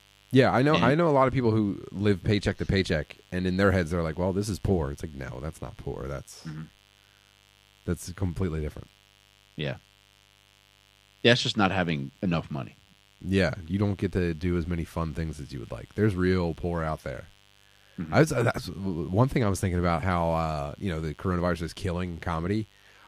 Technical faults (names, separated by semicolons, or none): mains buzz